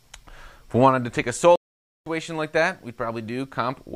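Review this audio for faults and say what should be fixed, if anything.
A playback stall silences the sound from 1.56 to 2.06 s, about 0.51 s, likely because the player starved of data or its thread blocked. The waveform goes flat and the spectrogram shows an empty vertical band. Deeper buffering and a higher-priority audio thread would prevent it.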